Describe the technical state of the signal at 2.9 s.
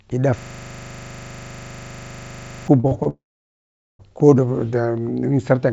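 Right around there you get two back-to-back short concealed packet losses, 2.80 to 2.85 s and 2.87 to 2.93 s, each about 40 ms missing. The decoder papered over both by carrying the last sound forward, then blending back, so it comes across as a quick smear or wobble.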